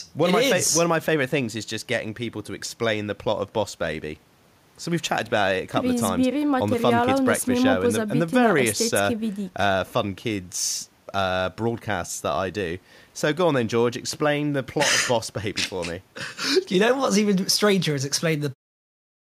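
Nothing is technically wrong with this speech recording.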